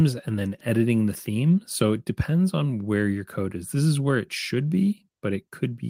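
No technical faults can be heard anywhere in the speech.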